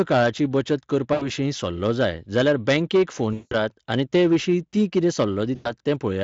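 Hard clipping runs through the whole of this speech recording: the level is driven about 9 dB past what the signal chain can carry, so a few percent of samples have their peaks sheared flat, and those squared-off tops add a harsh, crackly fuzz on every loud syllable. VoIP packet loss concealed by the speech codec interrupts it at 1.13 to 1.30 s, just before "सल्लो जाय जाल्यार बँकेक", at 3.33 to 3.55 s, between "सल्लो जाय जाल्यार बँकेक" and "आनी तेविशीं ती कितें", and at 5.55 to 5.72 s, after "आनी तेविशीं ती कितें". About 80, 180 and 100 ms of audio go missing, and the decoder fills each gap by stretching the last sound into a fading buzzy tone or coloured noise that stays weak briefly after the audio resumes. The underlying Speex coding at around 28 kbps adds only light coding damage.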